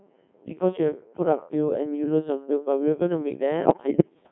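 From the first moment the whole clip runs through the Codec 2 vocoder, and it sounds like it: at around 1.6 kbit/s the decoder isn't keeping the waveform, just rebuilding the speech from pitch, voicing, level and a rough spectral shape, then synthesising it with sine waves. That gives the heavy, robotic buzz you hear throughout, squeezed into a band of roughly 200 Hz to 3.5 kHz, so there's no real low end or air.

Then from 3.65 to 4.14 s you get bit errors on digital voice radio. Bits are getting flipped at something like a 7 percent rate, which fits 11 corrupted frames, and at this bitrate every bit steers the pitch, loudness or tone of a whole frame. So for that half second the synthetic speech lurches in pitch and level, warbling and bleeping into garbled, gibberish-like noise before the clip ends.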